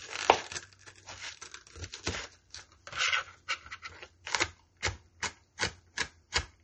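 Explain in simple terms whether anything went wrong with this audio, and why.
Low-bitrate audio saved at a high bitrate, throughout the whole clip: nothing is heard above about 8.4 kHz, so the top end sounds dull and the fine sparkle is missing. The likely cause is that the sound was first squeezed into a small MP3, which threw that detail away, and then saved again as a much larger MP3. A bigger file cannot bring back what the first step removed.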